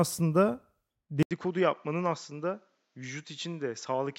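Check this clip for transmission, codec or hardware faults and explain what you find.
One fault turns up. From 1.23 s to the end, after an 80 ms gap, the speech goes duller, cut off above 7.6 kHz, a bit quieter, with faint new background noise: likely an input switched to a poorer device.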